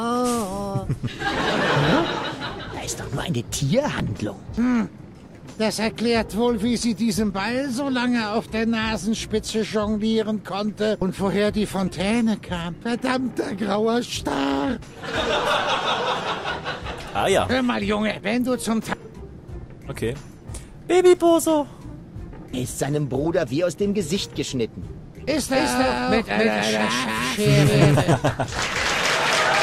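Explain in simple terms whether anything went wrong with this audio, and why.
From 25.54 s to the end, there is a doubled audio track. A second copy of the same sound plays about a third of a second behind, just as loud. It starts abruptly. This is likely an editing slip or a second, slower recording path.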